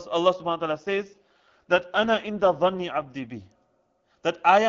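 A speech clip carried over AMR wideband (HD Voice), with an AMR rate drop from 0.33 s to 3.52 s. The voice turns rough and more synthetic, the kind of texture that fits a switch from the top rate near 23.85 kbit/s down to about 8.85 kbit/s, then clears again. A weak link pushes the codec to spend bits on error protection. On a spectrogram the band still reaches 7 kHz with no gap in the waveform, but harmonics look blurred and grainy throughout that span.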